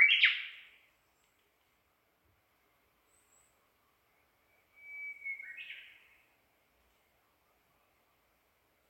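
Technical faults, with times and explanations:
No technical faults can be heard, so there are no times or explanations to give.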